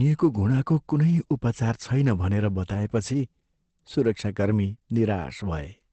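From start to finish the speech sounds muffled and hoarse, with nothing above about 8.6 kHz, so the upper sibilance and air are simply missing. This is likely Opus compression, with the encoder running in its SILK speech mode at wideband, which fits a very low rate of around 12 kbps. At that rate the encoder's voice model leaves heavy damage.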